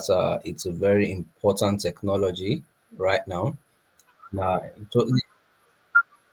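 At 0.95–0.97 s, just after "uh it's a", and at 1.87–1.89 s and 4.39 s, a lost packet was rebuilt from error correction: the decoder played a low-bitrate copy carried in the next packet. Unlike plain concealment, there is no gap or smear, only 20 ms each of rougher, noisier sound.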